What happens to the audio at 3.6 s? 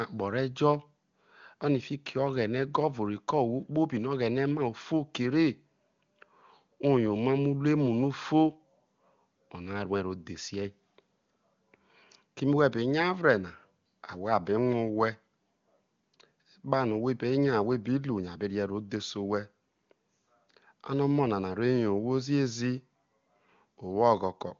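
Nothing goes wrong at 3.6 s: the speech there comes through intact, carried by the AMR wideband (HD Voice) codec at a rate that sounds like its top setting of about 23.85 kbit/s.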